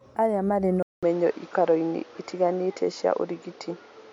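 It's a speech recording, and at about 0.83 s it drops out for roughly 0.2 s, then comes back duller, with nothing above about 7.1 kHz, a level shift of around 5 dB, and a new background noise sitting roughly 30 dB under the signal. That sound carries on to the end. The likely cause is the input switched to a poorer device mid-recording, with a narrower-band microphone bringing its own level and noise floor.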